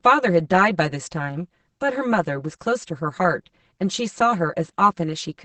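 Speech runs through the whole clip with two faults. Channel delay causes comb filtering: one channel lags by about 5 ms, so the mono sum cancels at evenly spaced notches from around 100 Hz upward. The sound is hollow and phasey. Opus voice compression is plainly audible too. The dull top, cut near 8 kHz, and the hoarse, slightly robotic speech suggest SILK coding at a low bitrate of roughly 12 kbps.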